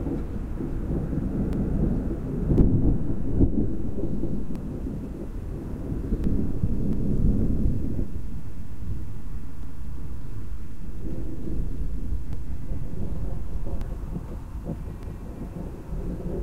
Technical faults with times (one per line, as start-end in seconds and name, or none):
1.53-1.73 overlapping chunks
2.58-4.55 DC step
4.23-4.43 overlapping chunks
6.24-13.81 DC step
6.93-7.13 overlapping chunks
9.63-9.83 overlapping chunks
12.33-12.53 overlapping chunks
15.03-15.23 overlapping chunks